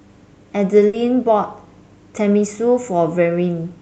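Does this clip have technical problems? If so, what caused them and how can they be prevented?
Yes. There is a burst of packet loss from 0.87 to 0.95 s. The receiver stretched the last sound for about 60 ms, fading it out. Speech then resumes, with about 60 ms skipped. More jitter-buffer headroom and forward error correction would prevent this.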